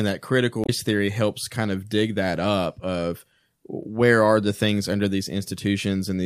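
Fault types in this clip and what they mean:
Damaged data in a compressed stream: corrupted bytes made the decoder misread frames and lose sync from 0.64 to 0.69 s in this speech. It comes through as a brief glitch in the sound.
Dropped samples: at 3.83 s a handful of samples, around four or well under a millisecond, are missing, so the waveform steps abruptly from one value to a later one. It is heard as a single sharp click, likely from a momentary gap in the sample stream.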